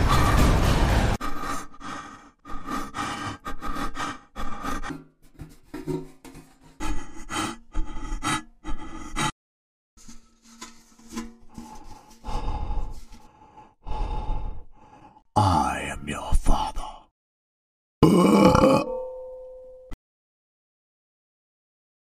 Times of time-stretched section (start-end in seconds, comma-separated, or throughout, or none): none